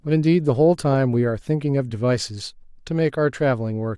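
No technical faults can be heard anywhere in the recording, and the signal holds steady with nothing breaking into it at any point.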